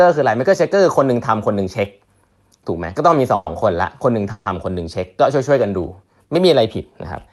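At 3.35 to 3.49 s and again at 4.32 to 4.49 s the speech stalls in a call audio freeze, likely from packets held up so the jitter buffer ran empty. The last sound is stretched into a fading buzz for about 110 ms, then about 140 ms, before the speech resumes where it stopped, with nothing lost. A spectrogram shows smeared horizontal bands dimming within the usual 12 kHz ceiling, and the waveform a decaying, repetitive stretch.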